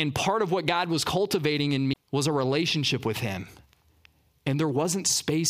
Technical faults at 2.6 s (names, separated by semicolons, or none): none